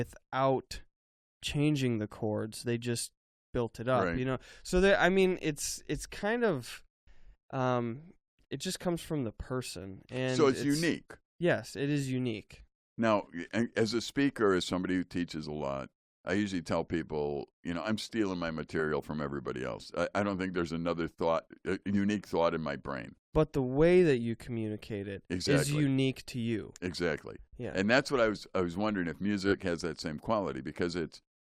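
At 29.46 to 29.55 s, a short run of compressed speech frames was sent or written more than once, which fits a pair of 20 ms frames, so the decoder replays the same slice three extra times. These repeated frames cause a brief stutter and add 60 ms to the audio.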